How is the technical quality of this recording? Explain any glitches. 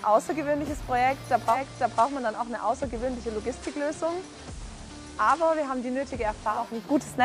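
The recording has one glitch. Digital radio blending to analogue occurs from 1.44 s to 6.67 s. The receiver lost its digital stream and cross-faded over 229 ms to the station's FM broadcast, then back. Level dips about 2 dB, and hiss rises to roughly 25 dB below the signal.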